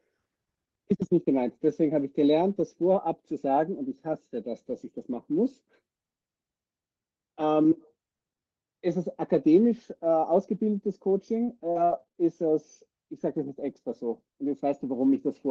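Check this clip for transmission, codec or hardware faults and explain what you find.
One transmission fault is present: repeated packet loss (robotic sound) between 11.09 and 12.26 s. Packets went missing or arrived late six times in just over a second, with the longest gap 41 ms and about 160 ms lost in total. Each hole was patched by stretching the preceding sound, so roughly a fifth of a second is rebuilt rather than real. The speech in that stretch turns choppy, with pieces missing.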